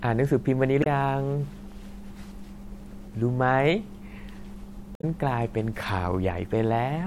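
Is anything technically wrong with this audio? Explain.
Yes. The speech has two short bursts of damaged data in a compressed stream, at 0.80 to 0.86 s and 4.93 to 5.04 s. Corrupted bytes made the decoder misread those frames and lose sync until it found a valid frame header, so each spot is a brief glitch, a chirp, squawk, click or short hole. On a spectrogram each appears as a narrow vertical smear of broadband or tonal junk. The waveform shows an abrupt, oddly shaped chunk that breaks the surrounding envelope.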